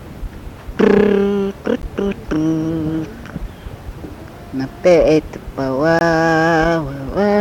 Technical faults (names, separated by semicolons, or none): block of digital silence